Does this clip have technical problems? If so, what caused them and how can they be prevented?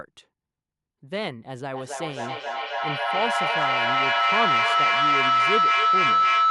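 Yes: feedback howl from 1.73 s to the end, peaking about 9 dB above the speech. Unlike echo, the repeats grow every third-second or so into a tone near 1.5 kHz. Mute one of the two devices sharing the room.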